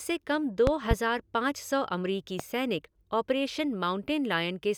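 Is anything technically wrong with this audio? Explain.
Yes. Loud pops cut through the speech: a double thump between 0.67 and 0.95 s, peaking about 20 dB above the voice, and a single pop at 2.40 to 2.43 s, about 15 dB above it. The speech carries on underneath. This is likely a brief voltage spike, from a connector, switch, static discharge or driver glitch, added to the signal and shaped by the following circuitry.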